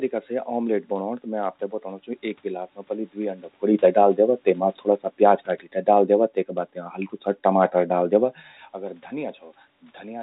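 Nothing in this speech clip points to a technical fault; the room noise and the talker shifting closer or farther around 3.5 and 8 seconds belong to the recording itself.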